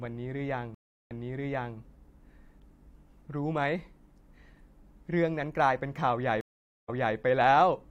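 Stream reconnects at 0.75 s and 6.41 s. The connection dropped, leaving silences of 0.35 s and 0.47 s. Playback resumes 0.68 s and 0.28 s earlier, repeating speech.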